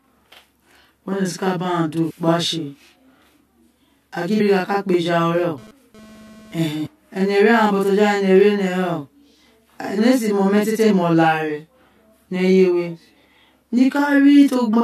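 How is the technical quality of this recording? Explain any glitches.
The technical quality is poor. Three separate faults run through this speech recording.

Channel delay (doubling) lasts the whole clip. One channel arrives about 42.7 ms after the other, which fits a 2048-sample buffer at 48 kHz. The two channels are then summed to mono. A gap that long does not blend into a single sound. The late copy stands apart at equal level, so the speech sounds doubled, with a short slap echo trailing each syllable.

Damaged data in a compressed stream causes five brief glitches: at 2.09 to 2.11 s, at 4.39 s, at 6.85 to 6.87 s, at 10.89 s and at 14.72 s. At each point part of the compressed stream is corrupt. The decoder misreads those frames and loses sync. It then hunts for the next valid frame header. Each one is heard as a short chirp or blip.

GSM phone buzz appears from 5.35 to 6.71 s. A nearby 2G phone transmits radio bursts 217 times a second. 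The audio circuitry rectifies those pulses into the signal. The result is a harsh, raspy 217 Hz buzz rich in harmonics, about 24 dB below the speech. It has nothing to do with the speech itself. Here it comes and goes rather than holding steady, which points to the phone doing a data transfer.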